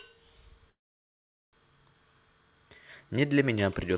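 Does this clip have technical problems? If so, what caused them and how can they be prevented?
Yes. At 0.7 s the speech stops and a brief continuation of the last sound dies away into about 0.78 s of silence, then the speech resumes at 1.55 s exactly where it broke off, with nothing lost but about 0.83 s of delay added. This is a call audio freeze, likely caused by delayed packets draining the jitter buffer. The sound carries no content above 4 kHz, which fits a G.711 A-law call path at 64 kbps. A larger adaptive jitter buffer and a more stable network path would prevent it.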